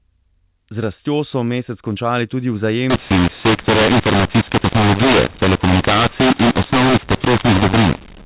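Telephone-band speech, and from 2.90 s, right after "so mesec končali tudi", to the end, it shows mu-law and A-law mixed up: A-law bytes decoded as mu-law scramble levels into harsh distortion. Unlike ordinary G.711 quantisation noise, which fades with the signal, pauses here fill with noise.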